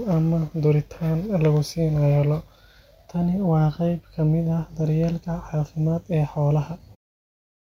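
Nothing here sounds like a fault, and the gentle fade-out just before the end, from around 7 seconds, eases the level down smoothly with no click or hard edge.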